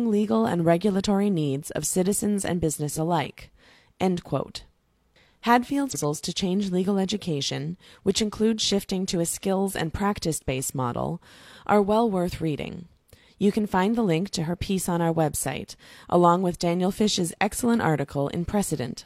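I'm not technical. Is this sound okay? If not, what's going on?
No. There is damaged data in a compressed stream: brief glitches at 2.93 to 2.98 s, after "needs of citizens and", and at 5.90 to 5.96 s, just before "to change legal education".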